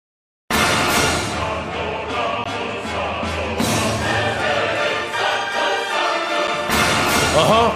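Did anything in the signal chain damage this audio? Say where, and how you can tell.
Yes. There is a gap between stream segments at the playback stage: hard-edged silences at 2.44 s (16 ms) and 6.47 s (8 ms), 4 s apart, which fits 4-second segments. The segment timestamps leave a hole that the player pads with silence. On a waveform the trace drops flat, and a spectrogram shows a thin, full-band blank column.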